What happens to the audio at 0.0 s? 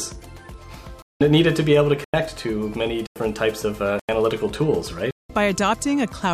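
Nothing goes wrong at 0.0 s; the audio is intact at that moment.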